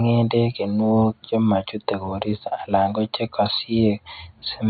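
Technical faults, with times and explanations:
No technical fault is present in this speech recording; the only background is the room's own noise, sitting about 54 dB below the speech.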